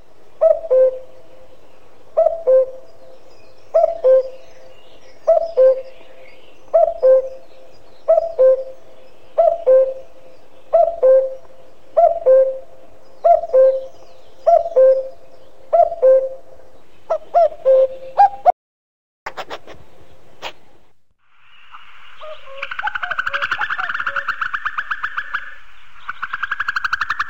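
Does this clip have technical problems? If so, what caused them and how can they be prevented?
Yes, there's an audio dropout to silence from 18.50 to 19.26 s, about 0.76 s of dead silence with no room tone. The input was likely lost briefly while recording kept going. Secure cables and connections, and lock mute controls, before recording.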